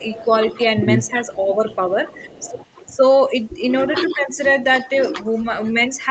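Right from the start, 0 to 0.28 s, the level sags by about 5 dB over roughly a fifth of a second. That's likely speech suppressed in double talk: both ends talking at once, and the echo canceller, unable to tell the local talker from loudspeaker echo, ducked everything. Inside that, at 0.14 to 0.21 s, there's a faint echo leak, a copy of the sound delayed by 313 ms and sitting about 20 dB down. It's likely residue the far end's canceller failed to strip from its microphone pickup. Another leak follows at 0.52 to 0.59 s at about 30 dB down.

The suppression returns harder from 0.73 to 2.32 s, dipping about 15 dB across roughly 0.7 s in total. During that stretch, at 1.12 to 1.44 s, a third echo fragment appears with the same 313 ms delay, about 25 dB below the direct sound. Then from 3.36 to 4.42 s the sound drops by as much as about 20 dB, in pieces adding up to around half a second. A final suppressed stretch runs from 4.81 s to the end, about 15 dB down. 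Throughout, the audio tops out at 8 kHz, which fits a 32 kbps Opus call path.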